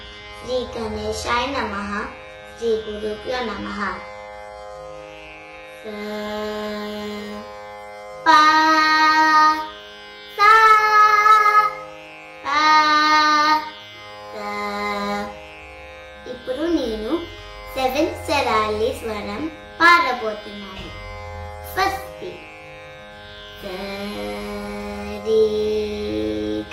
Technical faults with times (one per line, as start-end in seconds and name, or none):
0.00-6.00 adaptive stream starting at a low bitrate